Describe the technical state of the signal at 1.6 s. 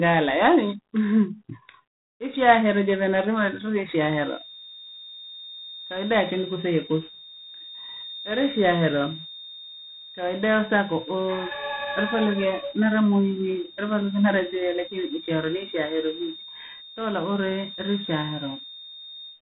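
At 1.6 s you're hearing G.726 ADPCM damage, and it runs through the whole clip rather than appearing just there. The codec sends each sample as a few bits describing how far the signal strays from an adaptive prediction. With so few bits, the error comes through as a harsh, rasping hiss that swells and fades with the speech level, which fits the 24 kbit/s mode. There's also nothing above 3.8 kHz, so the top end sounds sealed off.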